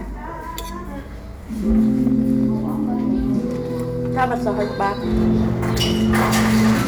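Crackly fuzz rides the loud peaks from 1.70 to 2.46 s, then from 4.18 to 6.85 s. This is hard clipping: the signal overshoots what the stage can pass by about 3 dB, then about 5 dB, so its peaks are sheared flat.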